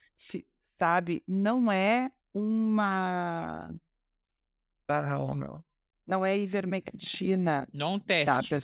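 A speech recording with nothing technically wrong, having come through a call path whose narrow band, with nothing above 4 kHz, fits a G.711 mu-law codec at 64 kbps.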